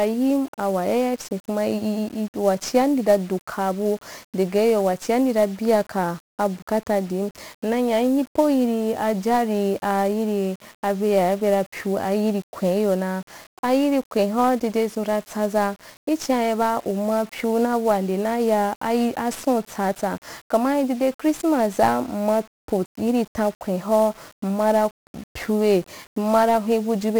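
From start to finish the speech carries 1-bit DFPWM compression, its heavy damage consistent with a rate near 48 kbps. Each sample keeps only one up-or-down step for a tracking level, so dense broadband quantisation noise leaves everything fuzzy and crackling, with the treble dulled or submerged in hiss.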